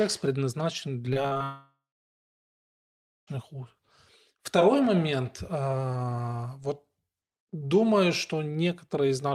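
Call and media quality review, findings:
Repeated packet loss (robotic sound), 1.13 to 1.42 s. Choppy, robotic speech with four short holes, the longest about 36 ms. Jitter buffer and concealment patching each gap by stretching the last sound, so about a third of this span is synthetic fill.

Long network dropout, 1.44 to 3.29 s. Concealment buzz decays, then silence for about 1.5 s. Roughly 1.8 s of speech never played. Speech resumes after the gap with that section lost. Likely cause is a transport outage upstream of the receiver.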